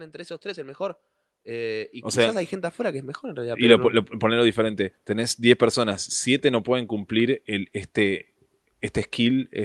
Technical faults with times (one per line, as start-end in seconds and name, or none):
0.10-3.86 automatic gain rising